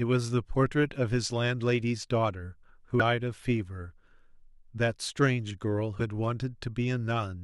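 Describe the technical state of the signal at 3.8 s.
At 3.8 s the signal is intact, with no audible technical fault at that point.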